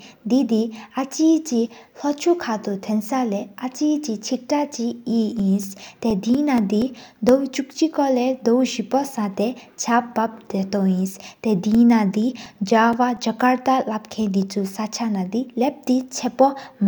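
From 5.16 to 7.29 s and again from 11.51 to 13.88 s, the speech carries CD scratch ticks, about five a second and only milliseconds long. Once per disc rotation, a scratch destroyed more data than error correction could rebuild, and the player concealed the gap.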